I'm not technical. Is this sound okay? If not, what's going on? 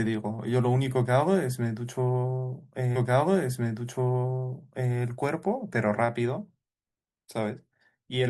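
No. From 2.95 to 4.95 seconds there is a stream segment repeated. The player fetched the same two-second chunk of speech twice, so that stretch plays again. You may hear a small blip where it jumps back.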